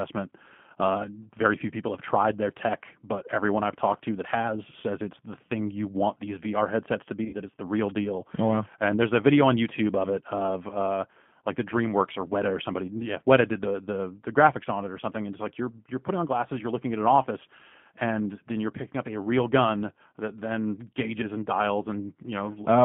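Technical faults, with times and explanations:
Throughout: G.729 codec. Speech sounds rough, slightly synthetic and muffled, band-limited to about 150 Hz–3.4 kHz, from an 8 kbit/s model rebuilding each frame.
7.25–7.36 s: VoIP packet loss concealed by the speech codec. After "headsets to", speech smears into a fading buzzy tone or coloured noise, as about 60 ms of lost frames were extrapolated, staying weak or distorted for a moment as "it's the real deal" begins.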